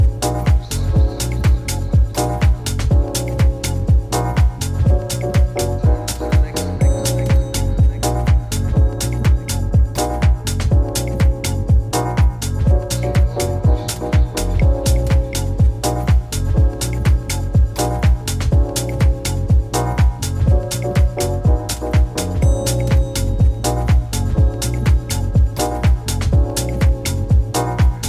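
Listening through the whole recording, nothing stood out as a technical problem.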